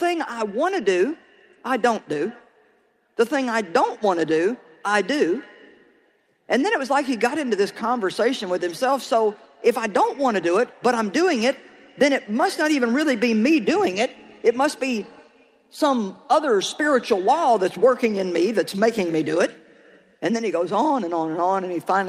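Nothing technically wrong can be heard anywhere in this audio. There is no fault to place in time or trace to a cause.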